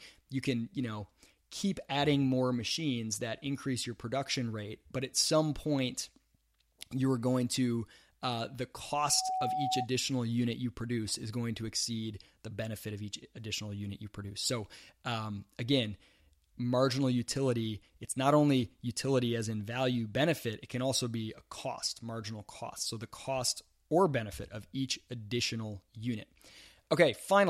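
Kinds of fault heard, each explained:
Loudspeaker feedback squeal: the microphone picked up its own loudspeaker, and at 751 Hz the loop gain went past one. A tone swells over about a third of a second after "going to uh the", reaches roughly the level of the speech, and cuts off by "unit you produce is".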